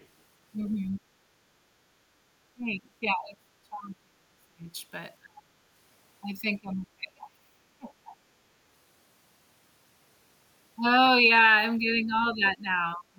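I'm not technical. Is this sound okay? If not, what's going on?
No. Two problems can be heard in this speech recording.

The first is the other side's voice leaking through. Right at the start, from 0.00 to 0.06 seconds, and again from 0.96 to 1.01 seconds, a faint second voice slips in. It is very quiet and very brief. The likely cause is the talker's device playing the other person on a loudspeaker. The microphone picked that sound up, and the echo canceller did not remove all of it.

The second is speech suppressed in double talk. It happens five times: 2.54 to 4.74 seconds, 5.21 to 5.60, 6.61 to 7.62, 7.78 to 8.13, and 11.78 to the end. In these spots the talker's voice suddenly sinks or nearly vanishes. The first, third and fourth of these dips are the deepest. The last one is milder. The likely cause is both people talking at once. The echo canceller could not tell the talker apart from the echo, so it turned both down.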